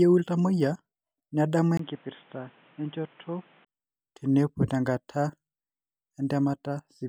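From 1.77 s to 3.67 s this speech recording turns dull and boxy. Nothing comes through above 3.8 kHz, the level drops by roughly 5 dB, a new background noise sits around 30 dB under the voice, and a brief 20 ms gap marks the changeover. Full clarity returns at 3.67 s. The likely cause is an input switched to a poorer device, such as a headset's narrowband call profile, that briefly replaced the original microphone.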